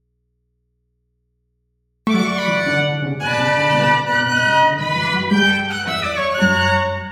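Audio dropout to a faint residue, start to 2.07 s: only mains hum about 50 dB down remains, likely from an open live input, then sound snaps back.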